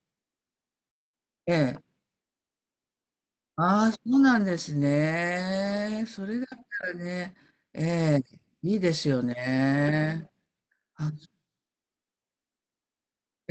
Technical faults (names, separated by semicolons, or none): none